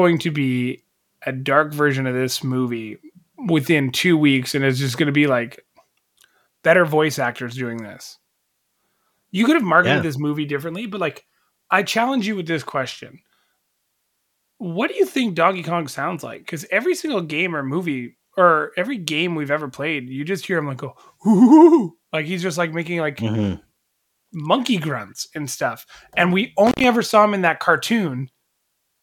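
At 26.67 s, just before "ever saw him in", an intermittent contact drops the speech for about 90 ms: a loose connection opens briefly, leaving crackle at the edges.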